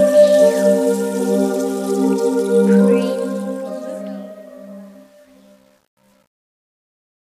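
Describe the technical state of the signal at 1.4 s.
At 1.4 s the signal is intact, with no audible fault at that point.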